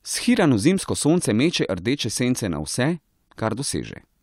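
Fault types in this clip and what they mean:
No faults can be heard anywhere in the recording.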